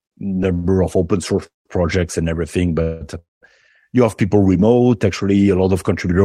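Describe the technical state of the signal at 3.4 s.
The sound hangs as a fading buzz, then goes silent, a call audio freeze from 3.19 to 3.43 s, likely jitter-buffer underrun; speech resumes where it stopped, 226 ms late.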